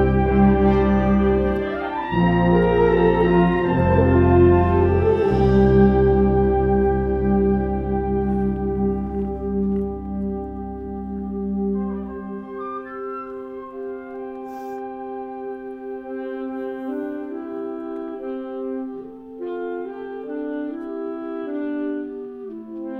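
Nothing here jumps out as a technical problem; the sound just carries on steadily with no glitches or dropouts catching the ear anywhere along the way.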